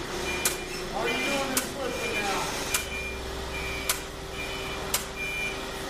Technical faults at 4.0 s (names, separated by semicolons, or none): none